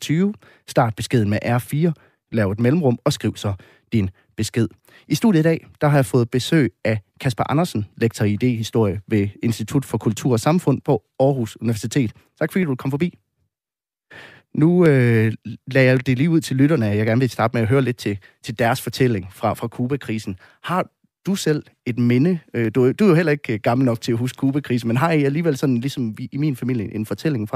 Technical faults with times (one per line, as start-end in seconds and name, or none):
0.39-27.10 clock drift buffer slips